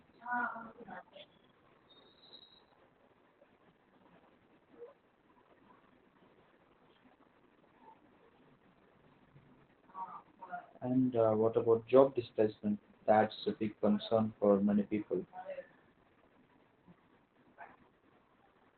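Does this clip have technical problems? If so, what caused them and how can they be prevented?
Yes. Opus voice compression runs through the whole clip. The speech is muffled, hoarse and slightly robotic. On a spectrogram, energy stops at a hard ceiling near 4.3 kHz, with empty space above. That narrowband result points to the codec's SILK linear-prediction mode at a very low bitrate, around 8 kbps. The coarse excitation coding gives the rough, buzzy texture. To prevent it, encode at a higher Opus bitrate so the codec keeps wideband or fullband audio.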